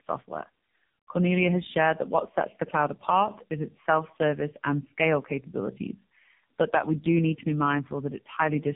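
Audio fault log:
Throughout: tandem speech coding. The speech has been through two low-rate narrowband speech coders in a row, consistent with AMR-NB joined by a G.711 link, so the second works on the first's degraded output. The result is roughness, muffling, warble, and nothing above 3.7 kHz.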